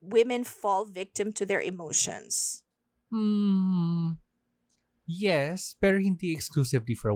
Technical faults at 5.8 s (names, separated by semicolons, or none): call bitrate drop